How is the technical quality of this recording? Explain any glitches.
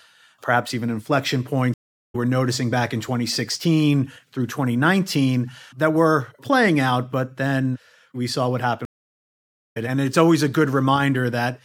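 The recording has two stream reconnect dropouts. At 1.74 to 2.15 s, after "perhaps even inflection", the audio goes silent for about 0.4 s and returns at "noticing back in", roughly 0.3 s further on. At 8.85 to 9.77 s, after "then we saw what", there is about 0.9 s of silence, and the audio resumes roughly half a second later. Each time the connection dropped and the player restarted decoding mid-stream, so a piece of the speech is skipped. A waveform shows a flat gap ending in a short fade-in, and a spectrogram shows a blank vertical band.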